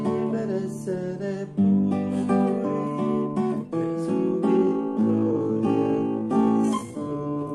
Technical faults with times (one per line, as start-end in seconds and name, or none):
4.55-7.54 time-stretched section